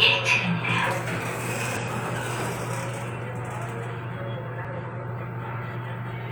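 At 1.77 s and 4.65 s, damaged data in a compressed stream makes the decoder lose frame sync, giving brief glitches.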